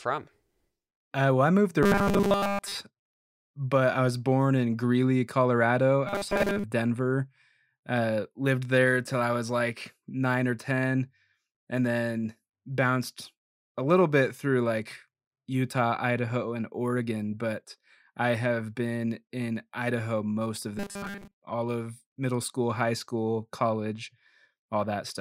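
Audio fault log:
1.83–2.77 s, 6.07–6.64 s, 20.78–21.36 s: robotic sound from repeated short buffers. The speech collapses into a rigid metallic buzz at a fixed 200 Hz, likely from a 5 ms stretch being looped while most of the real audio is skipped. That unchanging pitch sets it apart from codec warble.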